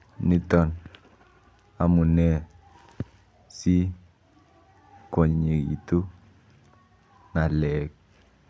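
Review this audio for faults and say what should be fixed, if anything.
Nothing here needs fixing, since no faults turn up anywhere in this speech recording.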